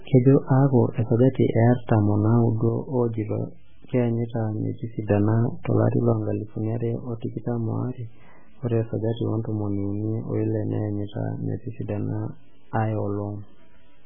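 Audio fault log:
throughout: MP3 compression. The speech sounds watery and swirly, with heavy codec damage and nothing above 3.5 kHz. The likely cause is a bit-starved MP3 encoder, which fits a rate near 8 kbps. Weak frequency lines flicker between frames, and the treble is cut.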